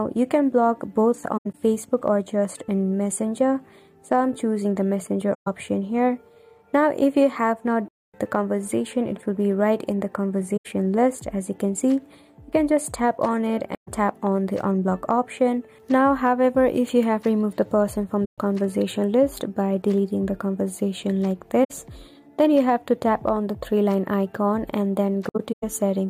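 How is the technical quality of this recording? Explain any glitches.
The recording has repeated dropouts from AAC frame loss with muting: soft-edged holes at 1.37, 5.34, 7.88, 10.57, 13.74, 18.25, 21.64 and 25.28 s. Each lasts roughly 64 to 256 ms, with the longest at 7.88 s, and the first and last are broken up into bits. The decoder zeroed the missing frames, and the overlapping windows fade the sound out and back in, so there are gaps.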